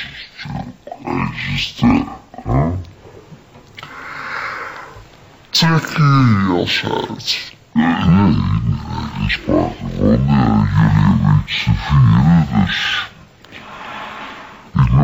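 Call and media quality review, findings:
Stereo read as mono, throughout. Audio runs at half speed (0.5x) and an octave low (-12 semitones). Probable component: decoder or capture format handling. Interleaved left/right samples are consumed sequentially as one channel, doubling duration; a fainter mirrored image appears in the upper spectrum.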